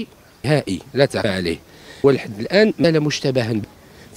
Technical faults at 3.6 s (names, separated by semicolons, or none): audio missing between chunks